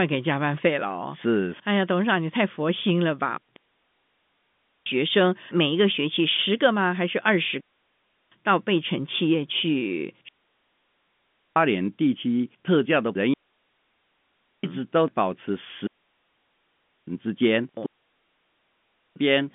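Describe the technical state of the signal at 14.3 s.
At 14.3 s the signal is inside a digital wireless dropout running from 13.34 to 14.64 s. The receiver has lost too much data and muted for 1.3 s, leaving a clean hole of near silence, with no noise burst at either edge, in the band-limited telephone-coded audio.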